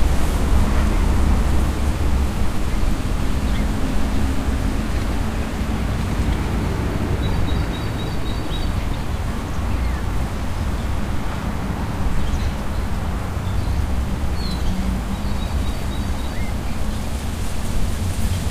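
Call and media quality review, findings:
No technical faults detected: the audio signal holds steady continuity and level throughout, with no defects attributable to capture, processing or transport.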